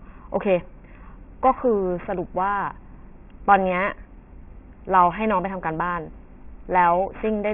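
Throughout the speech, the sample rate was cut without an anti-aliasing filter first, which fits a drop from 48 kHz to 6 kHz. That causes aliasing: energy above 3 kHz folds back to unrelated frequencies, roughly 20 dB below the speech, leaving sibilants gritty and metallic right up to the band edge.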